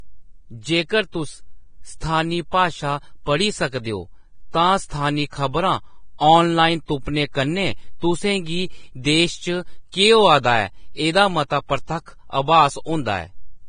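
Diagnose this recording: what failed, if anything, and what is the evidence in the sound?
Vorbis compression, throughout the speech. Nothing is present above about 9.7 kHz, and the upper band that remains is hissy and grainy, with consonant onsets smeared rather than crisp. The likely stage is the codec. The damage is heavy, which fits a bitrate in the low twenties of kbps. At that rate the encoder lowers its cut-off and quantises the treble residue so coarsely that fine detail is replaced by noise of similar energy.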